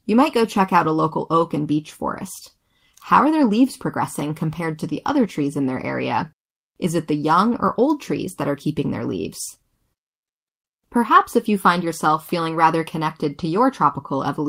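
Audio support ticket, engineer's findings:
Clock drift between sender and receiver: sender clock running fast by about 4 percent. Jitter buffer keeps overfilling, so the receiver has to discard audio to keep up. Recurring small timing hiccups throughout the speech, unevenly spaced. Probable component: receive-side jitter buffer and clock recovery.

Repeated timing corrections, 0.22 to 14.40 s: frequent short cuts in the speech, all removals, at irregular intervals. Net playback runs at 104 percent. Mechanism: receiver trimming fragments to stay in step with the faster sender.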